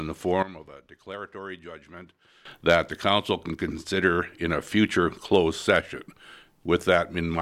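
At 0.43 s a sudden gain jump drops the sound and its background noise together by about 16 dB. Full level returns abruptly at 2.45 s. Likely an unramped digital gain change.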